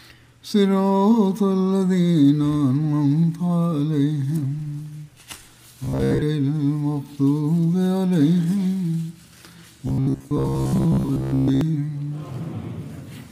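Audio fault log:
5.84–6.23 s and 9.88–11.61 s: robotic sound from repeated short buffers. A rigid metallic buzz is locked at 66.8 Hz, which fits a 15 ms segment replayed over and over. The likely cause is audio arriving too seldom, with most of each stretch filled by repeats.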